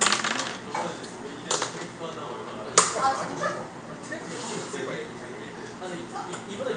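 No faults can be heard anywhere in this recording.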